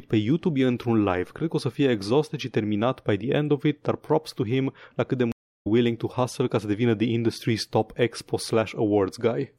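Stream reconnect at 5.32 to 5.67 s: the connection dropped and the player went silent for 335 ms, then reconnected and started a fresh decoder mid-stream. The speech picks up roughly a third of a second further on, so that stretch is skipped.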